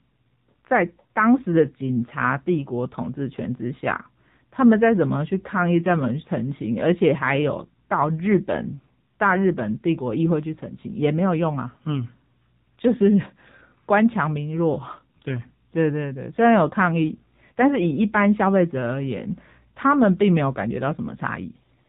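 Speech, carried through the AMR narrowband mobile codec for its whole length. Nothing above 4 kHz survives, so it sounds thin and phone-like. The voice is plainly buzzy and synthetic, as the pulse-driven vocal-tract model runs short of bits, which fits a low mode near 7.4 kbps.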